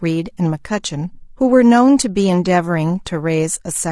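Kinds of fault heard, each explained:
Low-delay AAC compression: The speech sounds plainly rough and grainy throughout. Likely AAC-ELD, whose short frames resolve pitch poorly, at a rate suggesting 32 kbps.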